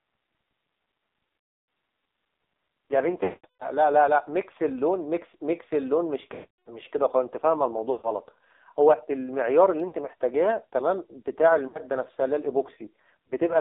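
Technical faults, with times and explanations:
throughout: AMR narrowband mobile codec. Everything is squeezed into roughly 300 Hz to 3.7 kHz, and the voice comes out heavily buzzy and synthetic, the sort of damage that fits a low 5.9 kbps mode where the vocal tract model gets very few pulses to work with.
1.38–1.68, 3.24–3.71, 6.34–6.79, 7.92–8.09, 9.88–9.94, 11.68–11.91, 13.28–13.33 s: lost AMR speech frames. The decoder fills the gaps by stretching out the last good sound with falling gain. The longer ones, around 300 ms, drag and fade to silence, while the short ones are just quick dips or warbles.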